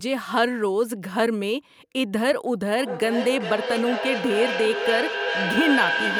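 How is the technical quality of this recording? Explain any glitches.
The recording has one clear problem, affecting its second half.

Feedback echo between two devices starts at 2.79 s and runs to the end. A second device in the same room is playing this call aloud, and its output is picked up again by the microphone. The local echo canceller only removes sound from its own device, so this copy is not removed. Each stretch of speech returns roughly every 0.4 s as a thinner, ringing copy, peaking at about 2 dB below the speech itself.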